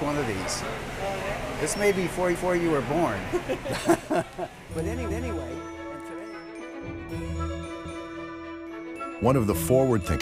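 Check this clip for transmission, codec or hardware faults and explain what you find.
There is a fault: overlapping chunks at 2.35–2.60 s, 5.10–5.35 s and 7.85–8.10 s. Each 2.5 s chunk begins 250 ms early, so that sound repeats as a stutter. Waveform and spectrogram show identical 250 ms blocks side by side, with a discontinuity at each join.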